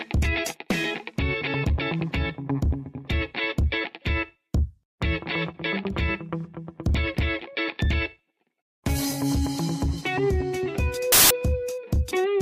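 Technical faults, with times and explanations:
11.12 to 11.31 s, file tags played as audio: the player reads an embedded cover picture's compressed bytes as if they were samples, so these random-looking values come out as roughly 0.18 s of very loud white noise, a sudden static burst with hard edges.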